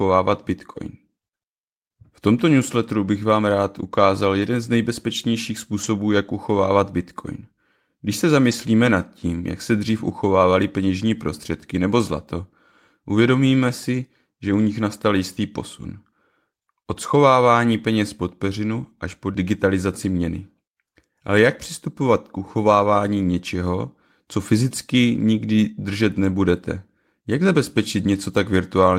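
Packets in the speech stream went missing, and the decoder rebuilt each from the low-bitrate backup copy carried in the following packet, a case of a lost packet rebuilt from error correction. This happens at 4.39 to 4.45 s, a stretch of about two packets, and at 5.83 to 5.85 s, 8.51 to 8.53 s and 18.83 to 18.85 s. There are no gaps, but those brief moments sound rougher and noisier than the surrounding audio.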